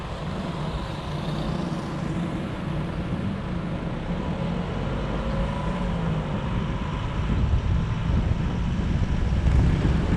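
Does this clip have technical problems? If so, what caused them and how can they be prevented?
No, this clip does not have technical problems.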